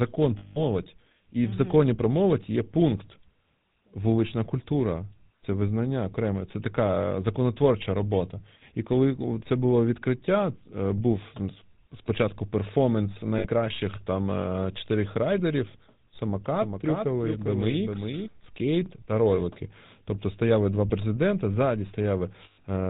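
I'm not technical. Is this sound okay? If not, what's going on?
No. The sound has four kinds of problems.

GSM full-rate codec: the whole clip passed through an early mobile-phone speech codec. That gives the speech a constant buzzy, gravelly roughness and a dull, phone-like sound with no crisp top end. It is steady throughout, unlike the brief glitches below.

Lost GSM frames: at 0.38 to 0.63 s, at 13.38 to 13.48 s just after "спочатку перформанс", and at 22.44 to 22.64 s just after "стояли два президента ззаді", pieces of the signal never arrived. The phone held the last good sound, so you hear a rough metallic ring rather than a clean repeat. The last gap is broken up, with its longest stretch around 0.15 s.

Doubled audio track: from 16.54 to 18.28 s a second, somewhat quieter copy of the speech runs about 0.4 s behind the original. Unlike a room echo, it has no fading tail, and it starts and stops abruptly. 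That most likely means the same audio was recorded twice or overlapped during editing.

Repeated buffer: at 18.86 s, just before "та ролики", the device ran short of new audio and replayed its last 10 ms chunk once. It is heard as a tiny click or buzz with a hard edge, not the fading metallic ring of lost GSM frames.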